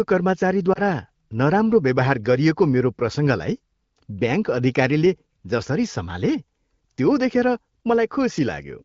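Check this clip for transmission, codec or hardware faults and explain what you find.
One transmission fault stands out, a single lost AMR speech frame, heard through a clean HD Voice wideband path whose light coding suggests a fairly high bitrate.

Lost AMR speech frames, 0.73 to 0.80 s: a corrupted 20 ms frame was concealed by reusing the previous frame's pitch and vocal-tract settings at reduced gain. It is audible as a brief warble or dip, shown as a short smeared, dimmed patch on a spectrogram and a small amplitude sag in the waveform.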